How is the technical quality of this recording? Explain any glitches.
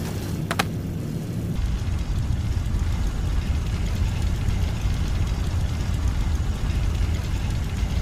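The technical quality of this recording holds up, with no glitches to explain.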